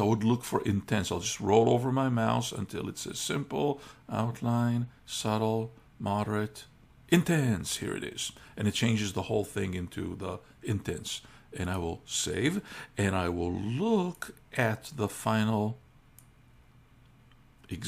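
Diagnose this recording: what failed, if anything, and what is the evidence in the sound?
Nothing failed, and the sound gives no evidence of any fault.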